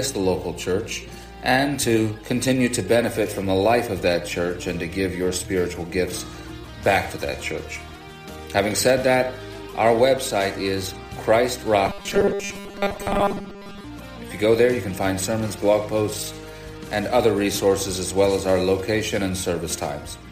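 From 11.87 to 13.84 s the sound collapses into a rigid, metallic buzz pitched at 200 Hz: robotic sound from repeated short buffers. Fresh audio is likely arriving too seldom, so the playback fills the gaps by looping the last 5 ms, and around seven tenths of the stretch is repetition. On a waveform the span shows an identical 5 ms cycle over and over; a spectrogram shows evenly spaced harmonic lines at multiples of 200 Hz.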